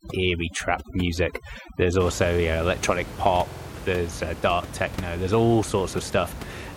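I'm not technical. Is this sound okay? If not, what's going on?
No. There are two problems.

From the start to about 2.0 s, just before "also yeah electronic", there is overdone noise removal. A cleanup tool set too strong erased the background noise along with quieter parts of the voice. It leaves near silence with twinkling specks. That twinkle is what sets it apart from a recording that is simply quiet or muffled. After that point the ordinary room noise returns, sitting well below the voice.

From about 3.49 to 3.67 s, right after "also yeah electronic", there are repeated frames. A tiny piece of sound, which fits a chunk of about 46 ms, plays again four extra times. You hear it as a quick stutter, and the clip gets about 0.19 s longer. Unlike an echo, the copies don't fade, and unlike a dropout, nothing goes missing.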